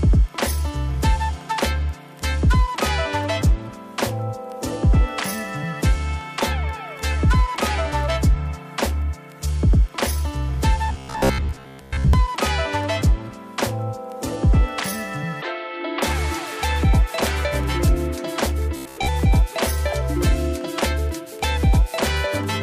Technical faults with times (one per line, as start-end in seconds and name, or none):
10.89-12.13 robotic sound from repeated short buffers
18.76-19.08 robotic sound from repeated short buffers